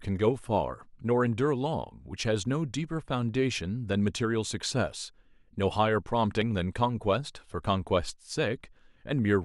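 At 6.42 to 6.44 s there is an overlap between stream segments. Two adjacent segments, which appear to be about 6 s long, carry time stamps that claim the same stretch of time, so the player discards the overlapping portion even though that audio was never actually duplicated. Roughly 23 ms of speech is removed and the waveform jumps across the gap, producing a barely perceptible skip in the speech.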